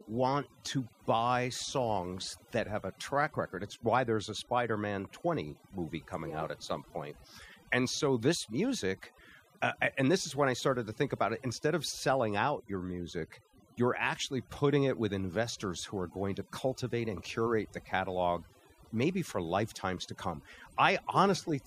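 From start to finish the speech carries overdone noise removal. A noise reduction stage was pushed far too hard on a noisy recording, so any frequency band sitting close to its noise estimate gets pulled way down or switched off, and the quieter parts of the voice go with them. Between phrases the background drops and breaks up into little twinkling specks.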